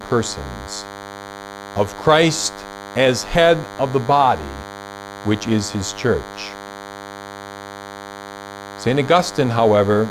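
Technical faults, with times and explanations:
Throughout, DECT cordless phone buzz: a steady, thin buzz at 100 Hz, rich in harmonics, sits roughly 15 dB below the speech. A nearby DECT handset or base station sends a radio burst every 10 ms, and the audio circuitry rectifies those bursts into sound.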